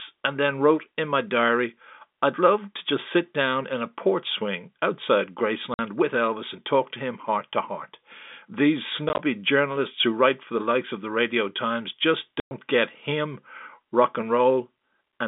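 Packet loss filled with silence: packets went missing and the receiver played silence in their place, cutting hard-edged holes in the speech. There is 50 ms at 5.74 s, gaps of up to 20 ms scattered across 9.09 to 9.19 s, and 110 ms at 12.4 s. The lengths suggest 10 ms packets.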